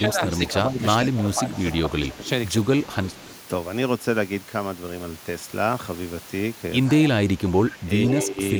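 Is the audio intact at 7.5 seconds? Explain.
No. From 7.37 to 8.27 s there is an echo leak, likely because a far-end echo canceller let loudspeaker sound picked up by its microphone pass back into the call. A faint copy of the speech trails about 114 ms behind, roughly 15 dB quieter.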